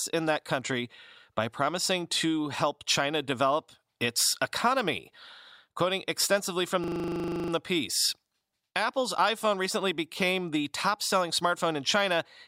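At 6.84 s, after "extensively from", a system hang loop starts. Frozen playback replays one 40 ms slice, buzzing at 25 Hz, until 7.52 s.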